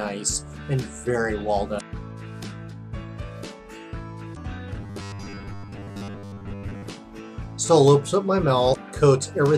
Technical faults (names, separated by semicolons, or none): damaged data in a compressed stream; robotic sound from repeated short buffers